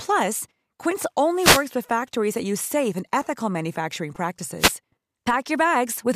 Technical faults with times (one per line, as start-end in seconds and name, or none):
1.34-1.68 wireless microphone noise hit
4.58-4.75 wireless microphone noise hit